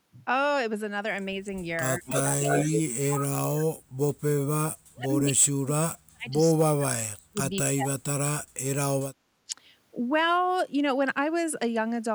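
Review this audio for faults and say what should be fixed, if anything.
Speech suppressed in double talk: the speech dips slightly at 1.31–1.47 s. It then cuts out deeply, by around 35 to 40 dB, at 1.98–3.78, 4.38–6.94 and 7.3–9.02 s. The echo canceller likely treated the overlap as echo. Better double-talk detection would keep the talker audible.

Echo leak: from 2.06 to 2.81 s, a copy of the speech returns 223 ms late. It is about as loud as the original. The far end's canceller likely missed its own loudspeaker pickup. A headset or better echo cancellation at that end would stop it.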